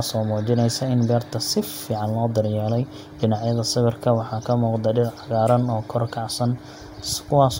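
No technical faults are audible.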